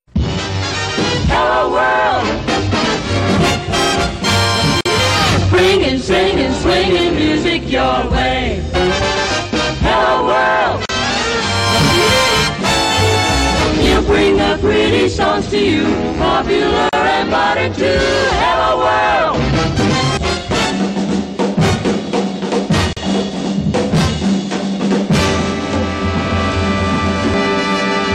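Gaps at joins of encoded pieces open at 4.81, 10.86, 16.89 and 22.93 s, lasting 48 ms and then 37 ms, every 6 s. Separately encoded pieces kept their start delay and end padding. Unlike dropouts, the sound resumes exactly where it stopped, with smeared edges.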